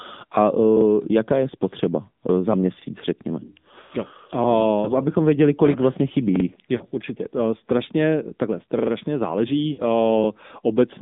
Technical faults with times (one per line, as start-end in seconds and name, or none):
0.00-11.01 AMR narrowband mobile codec
3.82-3.92 lost AMR speech frames
6.76-6.84 lost AMR speech frames
9.72-9.82 lost AMR speech frames